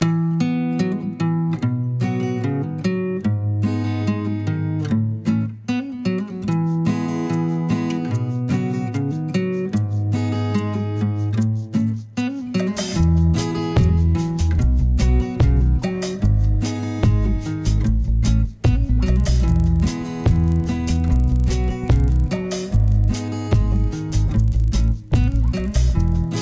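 From 19.16 s to the end at 26.41 s, the audio shows a resampler restarted on every block. The converter processed each 40 ms block in isolation, with no memory of the samples on either side, so every block boundary picked up a small error, in a pattern that fits a conversion from 24 kHz down to 16 kHz. Those boundaries recur 25 times a second, producing a low, rough buzz at 25 Hz that rides on the signal and vanishes whenever the sound drops out.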